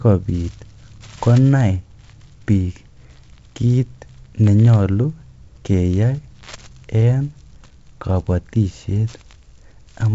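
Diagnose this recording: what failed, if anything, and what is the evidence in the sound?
Nothing failed; the G.722 wideband coding works as intended.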